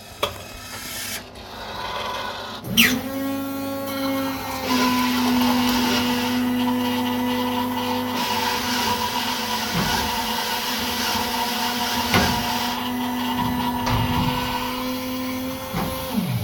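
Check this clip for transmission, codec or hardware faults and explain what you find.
Nothing here points to a transmission, codec or hardware problem; the audio comes through without anything that calls for comment.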